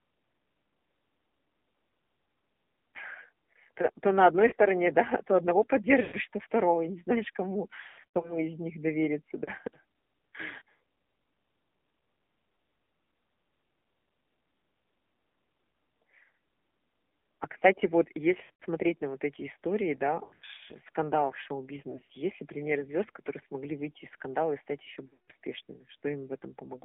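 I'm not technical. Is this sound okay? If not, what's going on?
No. The whole clip has the sound of the AMR narrowband mobile codec, the speech format of older mobile calls. It keeps only roughly 200 Hz to 3.5 kHz and rebuilds the voice from a simplified model, so it sounds muffled, buzzy and somewhat synthetic.

There are also lost AMR speech frames at 4.48 s, 6.02 s, 7.82 to 8.38 s, 9.44 s (after "из них довериться"), 18.44 s (between "кстати вот" and "на вот эти истории"), 20.24 to 20.62 s, 21.90 s and 25.08 s (after "скандала и стать ещё"). Each is a brief dropout from radio errors. The phone fills the gap by repeating the last sound more and more quietly, so you hear a short warble, a smeared stretch or a fade. The voice then returns weak or rough for a moment.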